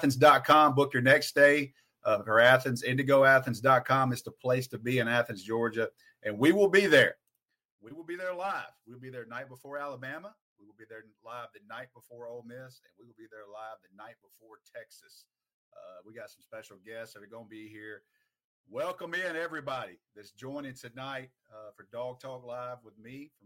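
From 7.10 to 7.49 s there is zipper noise. The level drops by roughly 15 dB here. It falls in coarse steps, not in a smooth curve. Each jump in gain leaves a tiny click in the waveform. The steps come at around 150 per second. That fast train of clicks fuses into a buzzy ticking. It rides on top of the sound while the fade runs.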